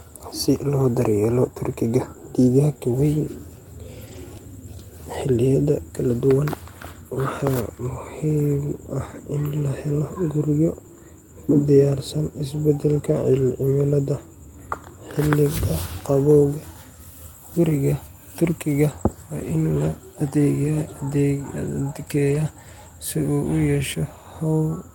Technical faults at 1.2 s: none

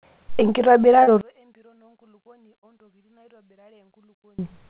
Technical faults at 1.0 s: short concealed packet loss

